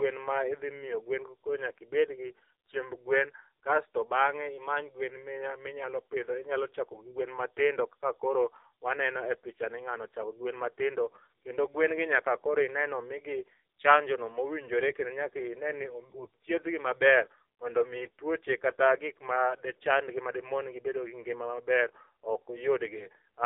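From start to finish, the speech carries AMR narrowband mobile codec damage. Nothing above 4 kHz survives, so it sounds thin and boxed in. The vocal-tract model is starved of bits, leaving voices buzzy and synthetic. The heavy damage fits a low rate near 6.7 kbps.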